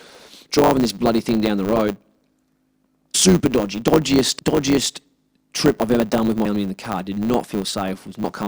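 Speech, carried throughout by a block size mismatch with truncation. A steady buzz sits at 100 Hz, the block rate. The talk runs about 1.07 times fast at near-normal pitch, which fits 512-sample writes being cut short by a smaller read. Compressed frames are skipped at 3.14, 4.38, 6.45 and 8.23 s. Roughly 200, 150, 200 and 100 ms of sound go missing, in whole 23.2 ms frames. The 4.38 s jump falls just before "dodgiest trip I've ever", and the 6.45 s jump just after "I've ever done with".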